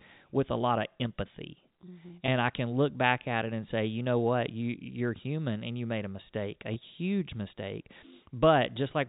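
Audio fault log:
2.26–2.28 s and 6.74–6.76 s, packet loss with pitch repetition: each time roughly 20 ms of audio failed to arrive, consistent with one dropped packet. The receiver filled each gap by looping the last pitch period of the speech. Because the gap is so short, it is heard as a brief held, slightly buzzy tone rather than silence, passing quickly within the narrow G.711 telephone band.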